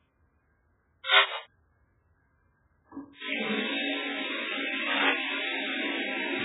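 A short clip of everyday sounds. Everything is dull and watery, with nothing above 3.8 kHz and heavy swirling, smeared artefacts, most likely from MP3 compression at a very low bitrate, near 8 kbps. Bursts of cable scratch noise occur from 1.14 to 1.37 s, roughly 5 dB above the sound, and from 4.87 to 5.11 s, at about the same level as the sound. These are likely from a loose contact being moved.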